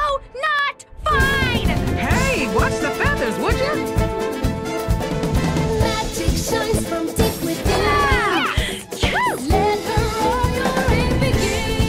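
Regular ticks sound every 0.125 s from 0.09 to 11.83 s: periodic USB or driver dropouts, each stall skipping a fraction of a millisecond.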